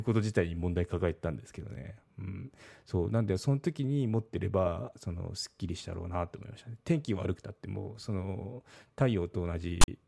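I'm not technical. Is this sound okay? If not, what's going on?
No. Near the very end, from about 9.81 to 9.88 seconds, there is a short, harsh rasp with sharp edges, followed by a moment of silence. This is file tags played as audio. Audio files carry hidden text labels, like a title. Here the player read that text as if it were sound, which makes a rasp. The empty filler after the text, made of zeros, came out as silence.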